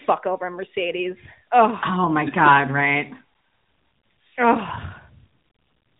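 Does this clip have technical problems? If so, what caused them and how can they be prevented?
Yes. The speech has been through the AMR narrowband mobile codec, AMR-NB, for the whole clip, and the damage is plainly audible. Nothing gets through above about 3.8 kHz, so the voice sounds boxed-in, like a phone call. At around 10.2 kbps, the codec rebuilds the voice from a vocal tract model and a handful of pulses, which gives it that synthetic edge. To prevent it, record or route the audio over a wideband path rather than a narrowband mobile link.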